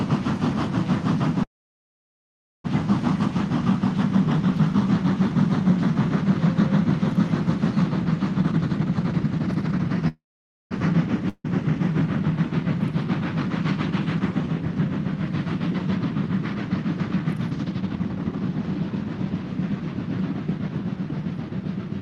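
Call audio freeze, 1.43 to 2.66 s: the sound stops and a fill of about 1.21 s takes its place, most of it (about 1.17 s) silence. This is likely packets held up in transit, draining the jitter buffer. The receiver briefly stretches the last sound as a fading buzz or hiss, then goes quiet. When packets arrive, playback resumes exactly where it stopped, so nothing is lost, but everything after runs about 1.21 s later.

Jitter buffer speed-up, 8.38 to 10.03 s: the audio runs at 166% speed with its pitch unchanged, so it sounds rushed. The buffer had built up more delay than its target, and the receiver cut out many short pitch-period pieces in a row, roughly a second in total, to catch up.

Call audio freeze, 10.08 to 10.73 s: a second stall, likely from held-up packets, fills about 0.63 s. A brief fading tail leads into about 0.52 s of silence. Playback then resumes with nothing skipped, about 0.63 s later than before.

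Long network dropout, 11.29 to 11.46 s: this one is likely a true loss of incoming audio. About 0.15 s is papered over with a decaying continuation of the last sound, including about 0.04 s of silence. When the audio returns, about 0.16 s of the original never plays, so the sound jumps forward.

Jitter buffer speed-up, 17.47 to 20.70 s: the same catch-up trimming runs longer here at 122% speed, removing roughly 0.7 s. The audio sounds hurried at its normal pitch. Throughout the clip the band tops out near 12 kHz, which fits a call codec such as Opus.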